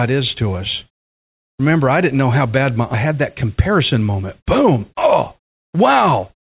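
A skip ahead comes at 2.94 to 2.96 s, right after "know how bad my". Roughly a second of speech never reaches playback, either lost in transit or discarded when an overfull jitter buffer cleared, and the two sides join with no filled gap, so the sentence lurches abruptly forward.

A jitter buffer speed-up then runs from 3.06 to 5.78 s. With excess audio queued, the receiver repeatedly trims tiny pitch-period slices, about a fifth of a second in total, so the speech plays at 108% speed with unchanged pitch and sounds rushed. The narrowband telephone tone, with nothing above 4 kHz, fits a G.711 mu-law call path.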